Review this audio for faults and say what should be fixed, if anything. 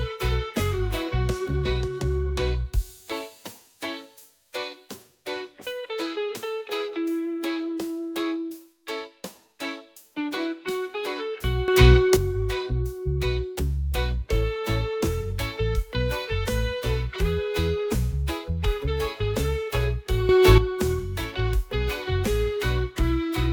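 Sudden gain jumps at 11.68–12.17 s (about 11 dB) and 20.29–20.58 s (about 10 dB): level and background noise rise together, likely from an unramped gain change, visible as an abrupt step in the waveform envelope and a full-band brightening on the spectrogram. Ramping all gain changes over a few milliseconds would prevent these steps.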